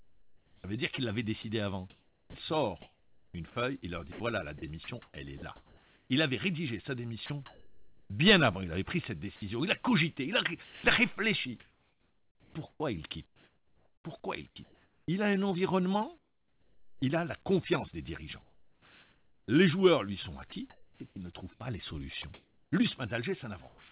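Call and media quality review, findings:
Choppy sound, 0.00–17.02 s (about 6.6 s replaced) and 18.42–23.91 s (2.1 s replaced). Sound chopped by the voice detector, likely: sender VAD toggling transmission, gaps filled with RFC 3389 comfort noise. Nothing above 4 kHz, which fits a 64 kbps G.711 A-law call path.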